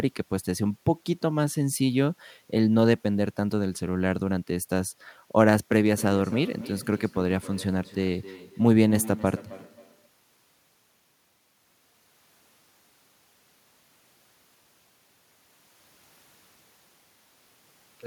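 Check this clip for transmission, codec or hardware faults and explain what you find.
One fault. From 5.86 to 10.14 s there is feedback echo between two devices. A second device replays the speech, roughly every third of a second, at about 16 dB down, thin and ringing.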